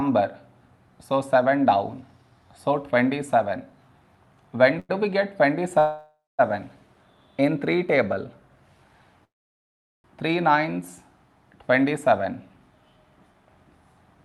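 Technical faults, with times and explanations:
4.79 to 4.91 s, short stall from a late packet: one sound is held about 0.1 s too long, with a faint buzzy dip. A packet arrived late, the jitter buffer ran dry, and the receiver stretched the last sound until it came, then resumed with nothing lost.
5.79 to 6.41 s, call audio freeze: the sound stops for about 0.6 s, turning to a fading buzz and then about 0.21 s of silence before resuming where it stopped. This is likely packets held up in transit, emptying the jitter buffer so a gap is inserted.
9.25 to 10.06 s, call audio freeze: a longer stop of about 0.8 s, almost all of it silence, after which the audio carries on from the same point with nothing missing. Again likely delayed packets draining the jitter buffer, so the receiver filled the wait.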